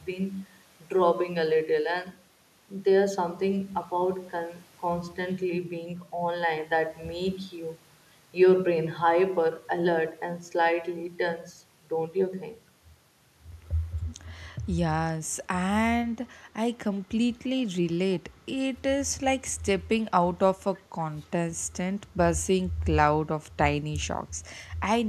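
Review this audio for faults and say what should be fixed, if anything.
At 14.09 to 14.15 s a faint, brief echo leak appears, a delayed copy of the speech arriving about 0.31 s late and roughly 20 dB down. The likely cause is the far end's echo canceller missing loudspeaker sound picked up by its microphone. Unlike room reverberation, this is a distinct repeat after a clear gap rather than a smeared tail. To prevent it, the far end should use a headset or retune its echo cancellation.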